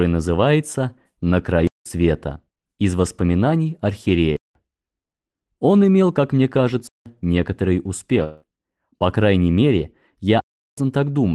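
Four times the audio drops abruptly to silence, a block of digital silence: at 1.67 s, 4.37 s and 6.87 s for about 186 ms each, and at 10.40–10.78 s for about 372 ms. The lengths fit an 8192-sample buffer going unfilled, doubled at the end. On a waveform these are flat silent lines with sheer edges, and on a spectrogram they are black columns. From 8.23 s to 8.45 s there is a long network dropout, likely from packets lost on the call path. About 180 ms of sound is missing, and the receiver covers the whole gap with a synthetic continuation that fades as a buzz or hiss, with no true silence left. A spectrogram shows smeared, decaying tonal streaks in place of real detail, and a waveform shows a shrinking, unnaturally regular envelope. The Opus call coding caps content at about 12 kHz, visible as a clean ceiling across the spectrogram.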